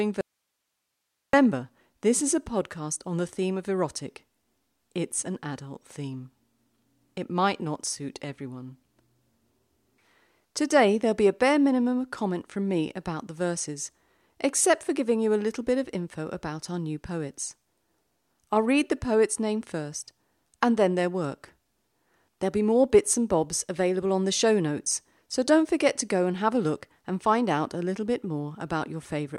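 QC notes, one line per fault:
0.21–1.33 s: audio dropout to a faint residue; speech cuts abruptly for about 1.1 s, leaving only hiss roughly 55 dB down, likely signal lost while the path stayed live.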